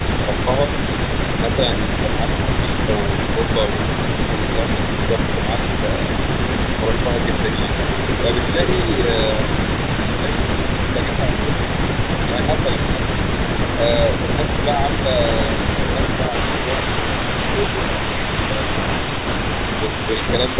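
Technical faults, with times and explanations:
0.00 to 0.91 s, echo leak: a faint copy of the speech trails the original by 393 ms, about 15 dB below it. This is likely a far-end loudspeaker feeding the microphone there, with the echo canceller not removing all of it, so the residue returns as a delayed duplicate. Like the rest of the clip, it is band-limited to 4 kHz, which fits a G.711 A-law call path at 64 kbps.
10.03 to 12.97 s, speech suppressed in double talk: the speech dips briefly while the other side talks, for about a third of a second in total and by no more than about 5 dB. Unable to separate local speech from loudspeaker echo, the canceller likely attenuated both.
14.50 to 16.77 s, echo leak: a stronger delayed copy returns, 341 ms behind and only about 10 dB down. This is a longer stretch of the same likely leak.
16.83 to 18.20 s, speech suppressed in double talk: the speech drops again during overlap, deeper this time, by about 10 dB, over roughly a fifth of a second. 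This is the same suppression, likely triggered by the echo canceller's confusion during simultaneous talk.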